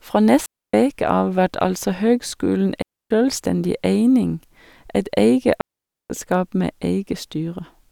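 Digital wireless dropouts cut the speech at 0.46 to 0.74 s, 2.82 to 3.11 s, and 5.61 to 6.10 s, holes of roughly 0.28 s, 0.28 s and 0.49 s. Each time the radio link lost too much data for the receiver to rebuild the signal, so it muted with a very fast fade. Every gap is a clean drop to near silence, with no crackle or noise burst on either side, and the sound resumes abruptly afterwards.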